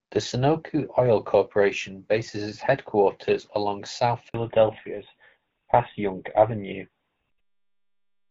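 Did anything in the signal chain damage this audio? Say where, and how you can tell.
Yes. At the network stage, a handover gap from 4.28 to 4.34 s drops 60 ms of speech frames during the cell switch, so the sound cuts out abruptly and that portion is lost.

At the codec stage, a fallback to narrowband from 4.34 s to the end removes everything above 4 kHz. The speech turns duller and rougher, which fits a switch from HD Voice to a GSM full-rate codec.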